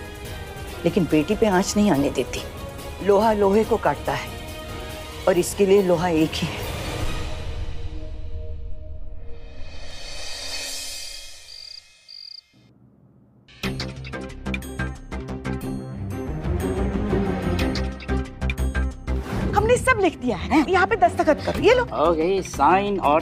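No technical faults can be heard anywhere in this recording.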